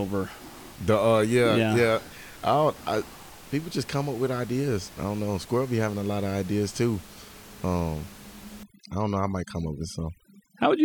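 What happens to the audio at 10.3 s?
Overdone noise removal is active at 10.3 s. It runs from 8.63 s to the end of the clip. A noise reducer set far too aggressively pulls down or shuts off each frequency band whose level sits close to its noise estimate. Because the room noise lies only about 22 dB below the speech, quieter parts of the speech fall into that range and are stripped away with it. The background drops and breaks up into twinkling, warbling specks.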